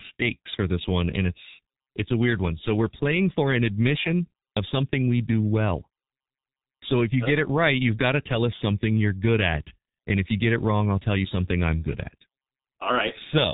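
Speech, run through the G.723.1 codec for its whole length, and it's heavily damaged by it. Nothing gets through above about 3.8 kHz, so it's muffled. The coarse, slow-updating voice model at what sounds like roughly 6 kbit/s leaves it hoarse with smeared consonants.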